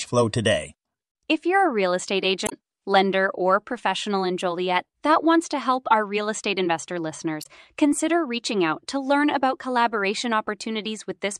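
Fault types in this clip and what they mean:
Damaged data in a compressed stream: at 2.44 to 2.53 s, after "you're a real estate", and at 7.41 to 7.46 s, after "our real estate investor", the speech breaks into a brief blip lasting roughly 80 ms and then 50 ms. Corrupted bytes in the encoded file leave the decoder unable to read those frames properly, so it misreads or drops them until it regains sync at the next valid frame header and resumes with "lender or professional in" and "consider reaching out to".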